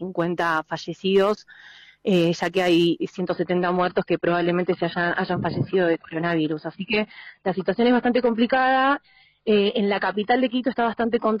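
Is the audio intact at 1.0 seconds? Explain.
Yes, the audio is intact at 1.0 seconds, with no dropout, click, distortion or other fault at that moment.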